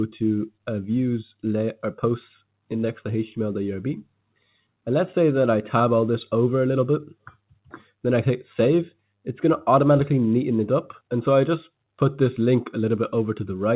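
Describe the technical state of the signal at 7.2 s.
At 7.2 s the sound sinks noticeably in level, dipping by as much as about 18 dB, with steadier or decaying parts thinned out and cut short while sharper onsets still get through. The dip runs from 7.14 to 7.9 s, about half a second of affected audio in all. This is sound cut by the noise suppressor: it mistook this material for background noise and pulled it down harder than its surroundings, all within a call band that stops at 4 kHz.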